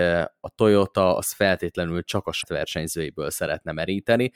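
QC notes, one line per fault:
2.39–2.44 s, damaged data in a compressed stream: corrupted frames after "az feltétlenül csak a" make the decoder lose sync, giving a brief glitch.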